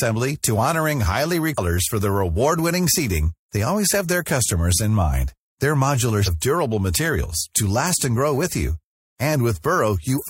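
Speech, with three brief bursts of damaged data in the compressed stream: at 1.54–1.59 s, 6.23–6.29 s and 10.17–10.23 s, each lasting about 50 to 60 ms. Each is heard as a chirp, squawk, click or short hole. Corrupted bytes in the encoded file cause the decoder to misread the affected frames and lose synchronisation. The garbled output continues until it locks onto the next valid frame header.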